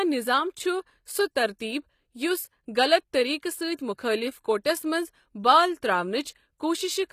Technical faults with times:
0.00-7.13 HE-AAC compression

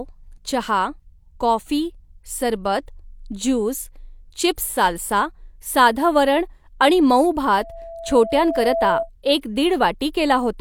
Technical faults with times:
7.57-9.09 loudspeaker feedback squeal

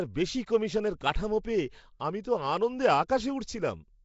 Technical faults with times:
0.00-4.04 Nellymoser compression
3.08 pre-echo

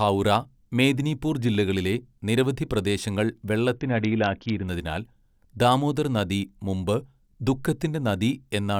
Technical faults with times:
3.77-4.67 Bluetooth SBC bit pool drop

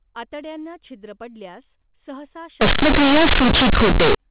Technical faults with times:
2.61-4.15 companded audio read as linear

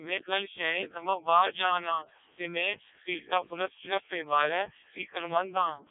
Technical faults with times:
0.00-5.91 Codec 2 vocoder

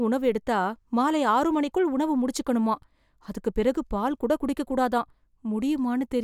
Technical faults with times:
none

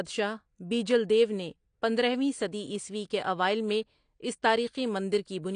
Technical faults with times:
0.00-5.55 AAC compression

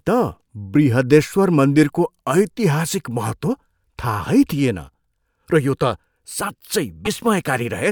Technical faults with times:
7.04-7.07 broken MP3 bit reservoir

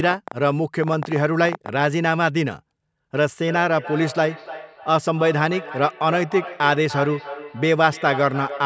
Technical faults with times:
0.04-1.70 train of clicks
3.47-8.65 feedback echo between two devices

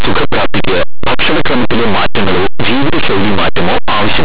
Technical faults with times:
0.00-4.24 linear audio read as companded

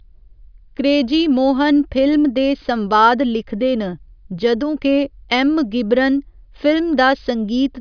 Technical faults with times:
none

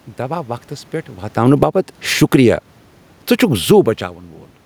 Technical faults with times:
1.24-2.49 automatic gain falling
1.69-2.85 automatic gain rising

